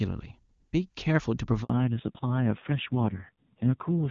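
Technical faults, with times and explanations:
1.64 to 1.70 s, handover gap: the call switched networks and no frames arrived for 60 ms, so the speech drops away and leaves a short silence before the new link picks up, with whatever was said in that stretch lost.
1.70 s to the end, fallback to narrowband: after the handover the link left HD Voice at 23.85 kbit/s for AMR narrowband at 5.9 kbit/s, so nothing above 4 kHz survives and the speech turns duller and rougher from that point on.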